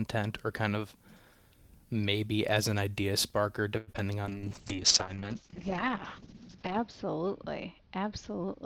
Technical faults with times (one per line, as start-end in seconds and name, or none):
3.77-3.89 call audio freeze
3.93-3.99 short concealed packet loss
4.27-8.65 call bitrate drop